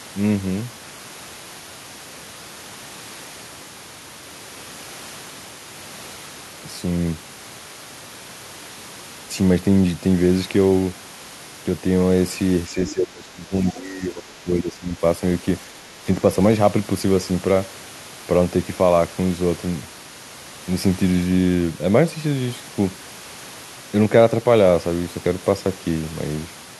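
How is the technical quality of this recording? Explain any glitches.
The recording has two linked glitches in the middle of the speech, both where the two sides of the call overlap.

From 12.69 to 15.02 s there is speech suppressed in double talk. The echo canceller was likely unable to tell the near talker apart from the loudspeaker echo while both sides spoke. It then pulled the whole microphone signal down. For about two seconds the speech dips and thins, falling by roughly 15 dB at its lowest, so parts of it sound hollow, distant or briefly chopped.

Within that stretch, from 12.88 to 12.93 s, the other side's voice leaks through. The far end is playing from the talker's loudspeaker, and the echo canceller left a residue of it in the microphone feed, likely because the overlapping talk confused its estimate. The result is a brief, faint scrap of a second voice, around 20 dB below the main speech, heard as a blip under the suppressed talker.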